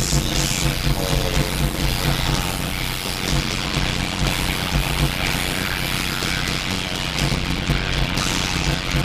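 Block size mismatch (padded) runs throughout the clip. One stage hands over shorter blocks than the next stage expects, which fits 256-sample writes into larger reads, and the unfilled remainder of each block is zeroed. The repeating silent gaps produce a steady buzz at 91.9 Hz, the block rate. Because each block carries padding, the sound plays at 0.533 times normal speed while keeping roughly its normal pitch.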